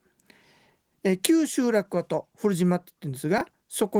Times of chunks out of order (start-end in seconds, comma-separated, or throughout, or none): 3.38-3.41